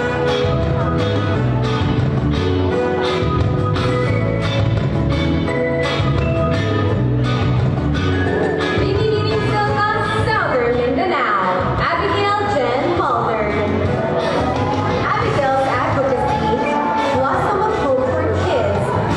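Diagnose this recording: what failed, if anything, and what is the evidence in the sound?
The failure is at the codec stage: damaged data in a compressed stream. Brief blips of about 50 ms each occur at 1.30–1.36, 3.81–3.87, 8.22–8.27, 11.75–11.80 and 15.00–15.05 s. Corrupted frames were misdecoded, and the decoder lost sync until it reached the next valid frame header.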